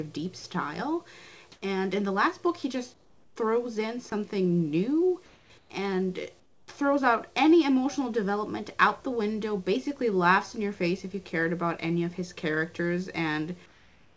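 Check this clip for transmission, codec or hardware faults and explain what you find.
Two faults are present: brief dropouts from the voice detector and comfort noise replacing the background, all carried over a G.722 call path whose content stops at 8 kHz.

Sound dropped by the voice detector occurs at 0.40–0.44 s and 4.10–4.12 s. The sender's detector likely misjudged quiet sound as background and paused transmission, so the receiver inserted synthetic noise. Each time, the sound briefly collapses into flat hiss for 40 ms and then about 20 ms before resuming.

Comfort noise in place of the background appears at 1.52–1.62 s, 2.94–3.36 s, 5.26–5.50 s, 5.58–5.70 s, 6.40–6.68 s and 13.66 s to the end. The sender likely stopped transmitting during pauses, and the receiver filled them with generated noise. The textured background, sitting around 31–35 dB below the loud parts, turns into smooth, featureless hiss. 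It is about 5 dB louder at 1.52 s and about 3–9 dB quieter elsewhere, with the largest drop at 6.40 s.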